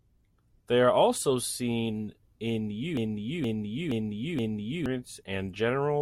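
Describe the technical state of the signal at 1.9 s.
At 1.9 s the speech signal is intact, with no audible technical fault at that moment.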